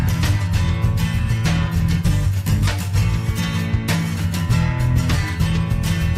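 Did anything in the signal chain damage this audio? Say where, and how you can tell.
No, nothing in the chain audibly damaged it.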